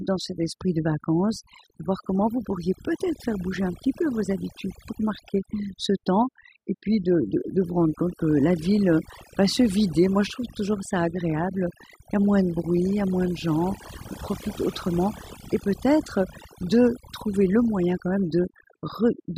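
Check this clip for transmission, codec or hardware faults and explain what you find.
Two faults are present: heavy-handed noise processing across the whole recording, and one very short dropout in the speech.

Overdone noise removal affects the clip from start to finish. The noise reducer was set too aggressively, so any frequency band sitting close to its noise estimate gets pulled far down or switched off entirely. Low-level parts of the speech fall below that threshold and are removed along with the noise. As a result, the background collapses to near silence dotted with twinkling specks.

A block of digital silence occurs at 3.85 s, between "faire bouger un" and "peu vos habitudes pour". For about 4.75 ms the sound cuts out, with no fade on either side. The abrupt step down to silence and back up again creates a discontinuity at each edge. At this length the two edges merge, so the gap is heard as a tick or dip rather than a noticeable hole in the speech.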